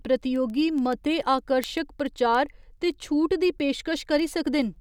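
A receiver reading the digital link runs on its own clock, unlocked from the sender's, and at each slip one sample is dropped or repeated. From 0.22 to 4.76 s this produces word clock ticks, around 30, one roughly every 0.15 s, which fits a clock mismatch of around 150 ppm.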